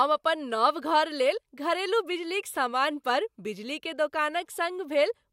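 No faults can be heard anywhere in the recording.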